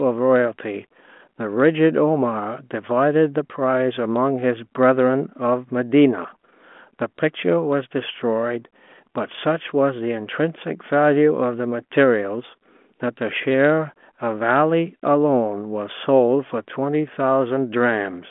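The speech comes through a G.726 ADPCM telephone path at 40 kbit/s, limited to the 200 Hz to 3.4 kHz line band with nothing above 3.8 kHz, and any coding hiss is at most faint, so no technical faults are present.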